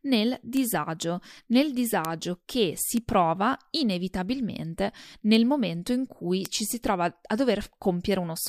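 Sharp, isolated ticks at 0.57, 2.05, 2.97 (just before "prova inevitabilmente"), 5.35 (before "momento in cui ci") and 6.46 s (between "momento in cui" and "ci si"), peaking about -3 to -15 dBFS. These are bit error spikes: a flipped bit throws one or two samples far off and back.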